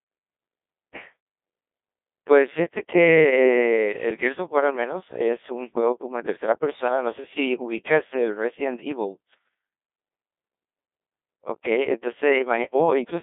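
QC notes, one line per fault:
Throughout, Codec 2 vocoder: the speech is rebuilt from sine waves driven by pitch, voicing and a spectral envelope, so it sounds robotic and buzzy. The damage is heavy, consistent with roughly 1.2 kbit/s, inside a 250 Hz to 3.6 kHz line band, with nothing above 3.8 kHz.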